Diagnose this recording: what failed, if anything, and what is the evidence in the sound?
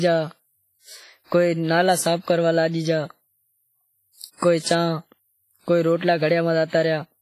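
WMA compression, heard throughout the speech, points to the codec stage. Consonants ring and smear, the background has a washy hiss that swells and fades with the talker, and nothing is present above 15.5 kHz. That points to a transform codec quantising coarsely over long blocks, spreading noise across tens of milliseconds and dropping weak spectral lines. The heavy damage fits a low bitrate around 24 kbps, likely from a WMA encode.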